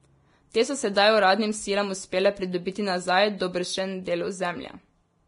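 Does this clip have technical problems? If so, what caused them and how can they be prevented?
Yes. Throughout the speech, the audio shows signs of heavy Vorbis compression, most likely from encoding at a low quality setting. The damage fits a bitrate of about 30 kbps, where the encoder drops the treble and spends too few bits on the remaining detail. Nothing is heard above 10.6 kHz. What survives of the upper range is coarsely quantised and replaced by noise-like fill, so consonants turn hissy and grainy and onsets lose their crispness. To prevent it, encode at a higher Vorbis quality setting or keep an uncompressed or lossless master for distribution.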